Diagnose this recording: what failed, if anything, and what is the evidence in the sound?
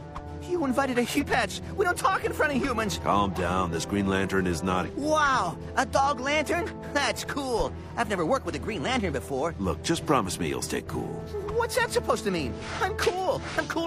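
The codec stage let you down here, with damaged data in the compressed stream. There are two brief glitches, at 1.16 to 1.23 s and 4.83 to 4.90 s, each under 70 ms. Corrupted bytes made the decoder misread those frames and lose sync until it found the next valid header.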